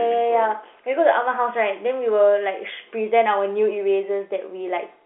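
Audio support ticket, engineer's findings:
No fault found; the speech sits in a 300 Hz to 3.4 kHz telephone band consistent with G.711 A-law coding at 64 kbps, with nothing further to report.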